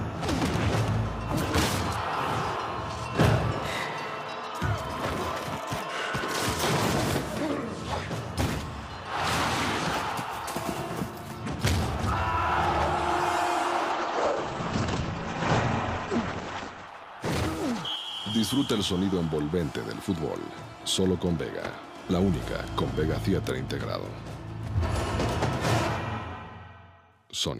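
At 13.93 s there's a call bitrate drop. The bandwidth estimate sagged and the encoder got starved, which fits a fall from about 96 to 14 kbps. The top end closes from 20 kHz to 8 kHz, so the sound goes coarse and muffled. It bottoms out for about 3 s and clears by 19.45 s.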